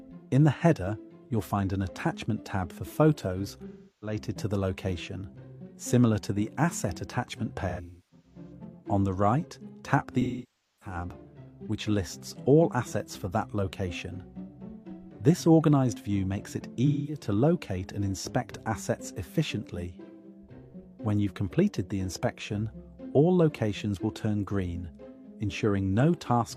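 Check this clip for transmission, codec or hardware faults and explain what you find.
Yes, there is one kind of fault: AAC frame loss with concealment, at 3.68–4.18 s, 7.69–8.52 s, 10.21–10.96 s and 16.86–17.22 s. Each sounds like a smeared, noisy, phasey patch where the decoder rebuilds missing frames from the last good spectrum. At 7.69 s the gaps are scattered, the longest around 300 ms.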